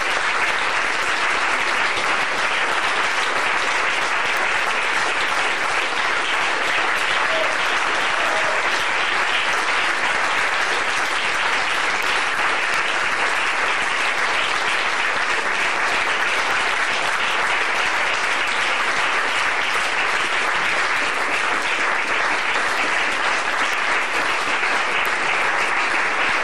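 The audio carries seven bit error spikes, isolated ticks at 4.37, 12.03, 12.74, 16.51, 22.77, 23.73 and 25.06 s, peaking at about -5, -11 or -17 dBFS. Each is a corrupted bit forcing a sample or a few briefly to a power-of-two offset before snapping back. Unlike a dropout click, nothing goes missing around them, and unlike crackle they are sparse, broadband and unrelated to the signal's level.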